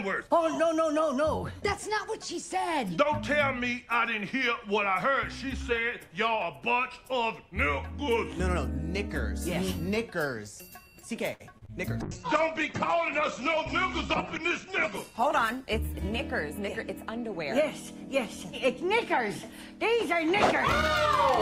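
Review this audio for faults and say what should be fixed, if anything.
Short stall from a late packet, 11.33 to 11.42 s: a packet arrived late, the jitter buffer ran dry, and the last sound was stretched for 66 ms before resuming, adding 66 ms delay. Deeper jitter buffering on this link would absorb such late arrivals.

Short concealed packet loss, 11.58 to 11.72 s and 11.65 to 11.70 s: about 40 ms went missing each time, bridged by extrapolating the preceding sound, heard as a brief smear. Forward error correction or redundancy would recover these losses.

Call bitrate drop, 12.03 to 18.74 s: the bandwidth estimate collapsed, cutting the encoder from 96 to 9 kbps for 2.45 s at the bottom and narrowing the band from 20 kHz to 8 kHz, so the sound goes muffled and coarse. Gentler congestion control with a higher bitrate floor would prevent it.

Jitter buffer speed-up, 14.39 to 15.65 s: excess buffered audio was trimmed by removing pitch-period slices, roughly 50 ms overall, so the sound runs at 104% speed with unchanged pitch. 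Slower, spread-out delay reduction would hide it.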